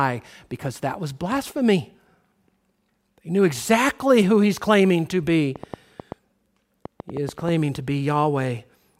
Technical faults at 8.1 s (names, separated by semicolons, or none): none